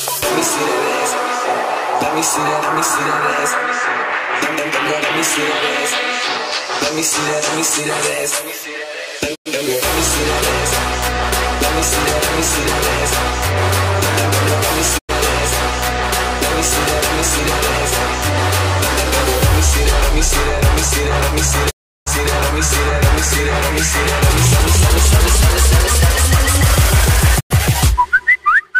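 The receiver lost its digital signal four times and muted until clean frames returned, a digital broadcast dropout. The audio fades to silence over 20 ms at 9.34–9.48 s, 14.97–15.11 s and 27.39–27.52 s, each gap fitting three lost frames. A longer 0.35 s hole falls at 21.69–22.08 s. Everything sent during those gaps is gone.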